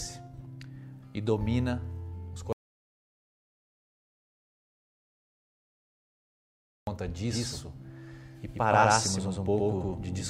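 At 2.53 s the sound cuts off mid-flow into an audio dropout to silence. The gap is silent, with no room tone. It lasts about 4.35 s, until 6.87 s. The input was likely lost while recording continued writing zeros.

From 7.31 s to the end, there is a doubled audio track. A second full-band copy trails roughly a tenth of a second behind, at about equal level. It starts abruptly and has no decay. A slower second capture path is the likely cause.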